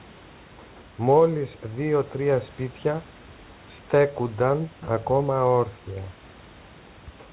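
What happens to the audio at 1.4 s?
Nothing goes wrong at 1.4 s: the speech carries on intact through that moment, with the narrowband call sound and faint room noise continuing unchanged.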